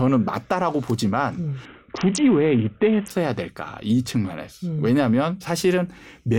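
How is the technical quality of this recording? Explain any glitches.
The speech has one clear glitch, a Bluetooth SBC bit pool drop. From 1.65 to 3.10 s the treble dulls and a gritty, grainy noise rises, then clarity returns. The link apparently throttled the encoder, which fits a bit pool falling from 28 to 5, near 54 kbps. The upper sub-bands were starved of bits and the rest quantised coarsely.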